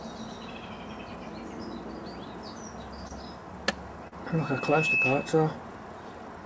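At 3.08 s and again from 4.08 to 4.13 s, short concealed packet losses leave brief smeared gaps of about 20 ms and 40 ms where the decoder extrapolated missing audio. From 4.31 to 5.55 s, a loudspeaker feedback squeal appears: a 2.6 kHz tone builds over roughly 0.7 s to around 10 dB above the program, as the microphone re-amplifies the loudspeaker output. Throughout, the call path's band limit leaves nothing above 8 kHz.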